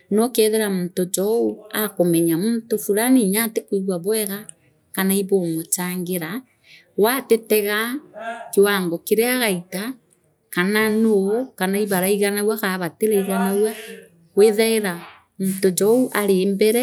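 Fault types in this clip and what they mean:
No faults detected on this speech recording; nothing to list.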